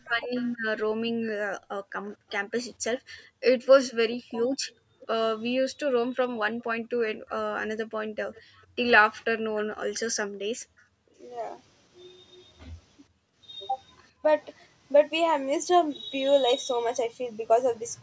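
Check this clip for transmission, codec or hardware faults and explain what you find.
There are three echo-canceller problems in this speech clip: the talker gets ducked during double talk, echo leaks back several times, and the background gets gated.

Speech suppressed in double talk shows up at 0.05 to 0.31 s and 4.11 to 4.45 s. The voice drops out in pieces, sinking by something like 30 to 40 dB at its worst, for roughly a third of a second each time. The likely cause is both ends talking at once. The canceller couldn't separate the near talker from the loudspeaker echo, so it pulled everything down.

Echo leak comes in at 0.34 to 0.5 s, 2.07 to 3.01 s, 5.01 to 5.07 s and 6.6 to 9.66 s. Each time, a faint delayed copy of the voice trails about 440 to 480 ms behind, sitting roughly 25 to 30 dB under the main speech. The short ones are just scraps, and the last one runs for about three seconds. 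The far end is likely on a loudspeaker, and its canceller didn't fully remove what its mic picked up, so some of it got sent back.

Background gated by the echo canceller hits between 1.13 and 11.19 s, where the room tone ducks by about 40 dB at its deepest, for around three seconds in total. It happens again briefly between 13.09 and 14.23 s, for around 400 ms. The canceller is clamping the mic hard while the loudspeaker plays, so the ambience drops out and snaps back once it lets go. The call-style mic processing, with nothing above 8 kHz, is normal and isn't a fault.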